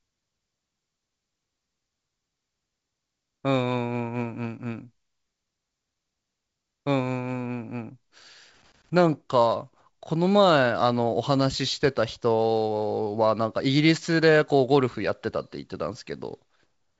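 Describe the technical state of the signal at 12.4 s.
At 12.4 s the speech is intact, carried by G.722 wideband telephone coding at 64 kbit/s with no fault present at that moment.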